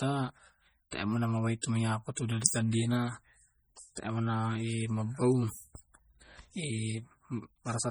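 Heavy MP3 compression runs through the whole speech clip, likely from an encoder starved of bits, which fits a rate near 32 kbps. The encoder discards weak frequency lines and they pop in and out between frames, giving a watery, swirling texture, chirpy sibilants and smeared onsets. On a spectrogram the upper bands break into flickering blocks and gaps rather than smooth energy, with content stopping near 21.1 kHz.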